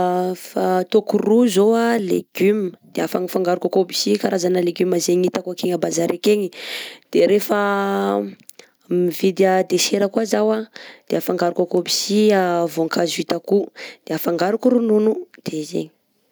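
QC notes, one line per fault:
Nothing to flag here, so no QC entries are needed for this one.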